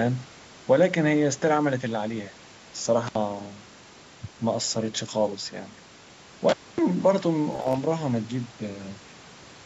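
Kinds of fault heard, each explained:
Intermittent contact: A loose connection briefly opens the line, so the sound cuts out at 3.07 s for about 67 ms and at 6.49 s for about 250 ms. The waveform drops to near-flat between crackle spikes, and the spectrogram shows broadband vertical clicks bracketing a faint-hiss gap.
Bluetooth stutter: Around 7.53 to 7.78 s, late or missing packets make the receiver replay its last slice, losing about 122 ms over 213 ms, which fits roughly eight dropped packets. The waveform shows identical repeated segments, longest run 30.5 ms, and the spectrogram shows repeating vertical striping.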